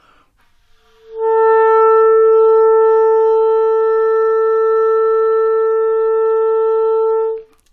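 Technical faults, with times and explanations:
Nothing in the sound stood out as a technical problem on listening.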